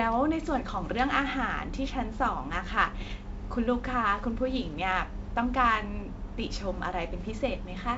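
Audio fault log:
0.85–0.94 s and 3.00–3.21 s, bit errors on an ADPCM link: pops and rough bursts with level jumps, as flipped bits throw the decoder's step size and predictor off for milliseconds.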